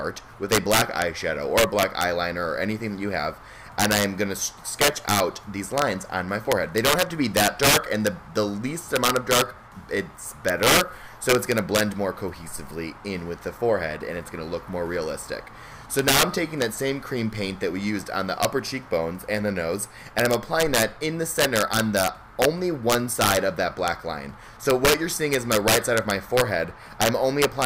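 Integer overflow runs through the whole clip. With gain about 10 dB too high, the small fraction of samples exceeding the integer limit wrap to the opposite sign instead of being limited, so those peaks jump across the full range and produce cracks sharper than clipping.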